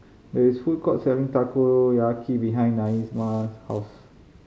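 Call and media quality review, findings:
Sample clock jitter, 2.86 s to end of clip (4.47 s). Symptom: hiss and roughness riding on the speech, strongest on loud and sibilant, fast-changing segments, gone in pauses. Probable component: converter clock. Mechanism: timing wander of around 10 µs, error scaling with waveform slope, roughly 30 dB below signal. Spectrogram: broadband haze filling high frequencies only while speech is present. Waveform: fuzz on steep edges, clean silences.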